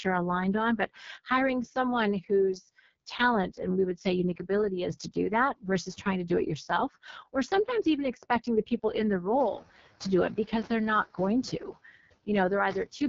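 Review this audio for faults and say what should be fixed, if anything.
Throughout the speech the sound is rough and raspy, with a buzzy, gritty texture and nothing above about 7 kHz. This is heavy damage from the AMR wideband (HD Voice) codec running at 6.6 kbit/s, its lowest rate. At that rate the pulse-driven vocal tract model has too few bits to describe each sound accurately, and the top band is only filled with shaped noise. The background room noise, which rises by about 16 dB around 9.5 s, passes through the same coarse coding. To prevent this, keep the call at 12.65 kbit/s or higher so AMR-WB has enough bits to code speech cleanly.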